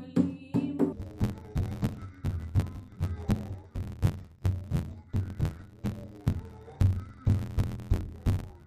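From 0.93 s to the end, the audio turns dull and robotic with a steady buzz near 86 Hz, the sign of interleaved audio read as planar. Each short block, about 11.6 ms and consistent with 512 samples, is split wrongly between channels. Unlike a sample-rate mismatch, the pace stays correct and there's no clear octave drop.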